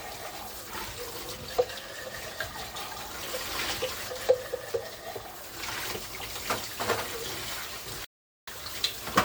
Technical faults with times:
8.05-8.48 rebuffering stall

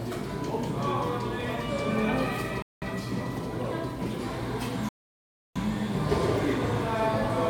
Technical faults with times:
2.62-2.83 Bluetooth stall
4.89-5.57 Bluetooth stall

